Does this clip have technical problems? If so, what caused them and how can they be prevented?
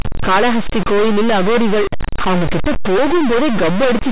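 Yes. Distortion runs through the whole speech clip, and the pauses are filled with noise. This is a stuck bit, likely caused by a faulty converter or data line that holds one bit fixed. Testing and replacing the faulty converter or cabling prevents it.

At 1.98 s, between "காளகஸ்தி கோயிலில் அகோரிகள்" and "அவங்க கிட்ட", about 20 ms of audio never arrived. The receiver extended the preceding sound to fill it, causing a brief smear. This is short concealed packet loss. A more stable network connection or a larger jitter buffer prevents it.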